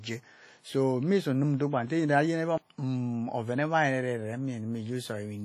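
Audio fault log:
throughout WMA compression: heavy transform-codec damage, likely from a low-bitrate encode near 32 kbps; long blocks smear quantisation noise into ringing, washy speech with signal-following hiss.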